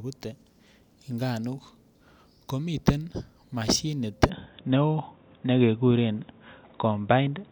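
At 4.30 s, after "ko miten moshinit", the speech turns dull, likely from the input switching to a poorer device; the spectrogram goes empty above 3.8 kHz.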